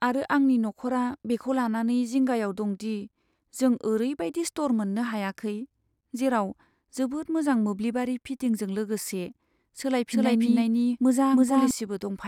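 A doubled audio track appears in this speech recording from 10.11 to 11.71 s: a full-band copy trails the original by about 0.3 s at roughly equal level, without decay, starting and stopping abruptly, likely from a slower second capture path.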